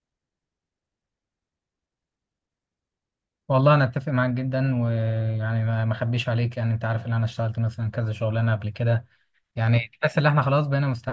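No technical faults are audible.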